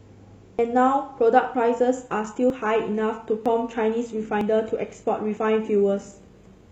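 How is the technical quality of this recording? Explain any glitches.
The recording has two problems: a regular series of short skips, and a sudden drop in quality partway through.

Audio missing between chunks: seven brief skips occur at 0.59, 1.54, 2.50, 3.46, 4.41, 5.37 and 6.32 s, roughly one per second. Each removes around 40 ms, and the surrounding speech is butted together with no silence. The likely cause is a processor working in 1-second chunks that drops a sliver at each handover.

Adaptive stream at a lower bitrate: from 1.95 s to the end, the speech abruptly takes on heavier codec artefacts. There is no gap at the switch. This fits a stream stepping down from roughly 96 kbit/s AAC-LC to a 20 kbit/s HE-AAC rendition.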